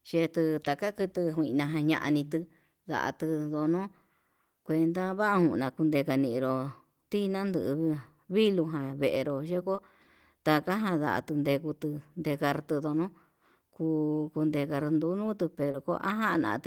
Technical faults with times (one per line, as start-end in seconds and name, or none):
9.75-9.79 short concealed packet loss
15.71-15.76 short concealed packet loss